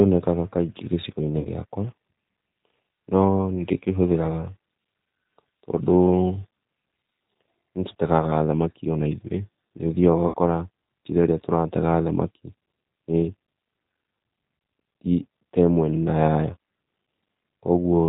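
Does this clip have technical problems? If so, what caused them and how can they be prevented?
Yes. The whole clip carries G.729 codec damage, consistent with the 8 kbit/s G.729A codec. It rebuilds speech from a vocal tract model and a few pulses per frame. Nothing above 4 kHz survives, so the voice sounds plainly rough and synthetic. Using a wideband codec such as Opus, where bandwidth allows, would prevent this.

VoIP packet loss concealed by the speech codec occurs at 1.39 to 1.47 s, and at 10.28 to 10.35 s, just after "ona ithũĩ nĩ ũthiaga". Each gap covers 60 ms of missing audio, which fits two lost packets. The decoder extrapolates from its last pitch and filter, lowering the gain frame by frame. Jitter buffering, network priority for voice traffic or forward error correction would prevent it.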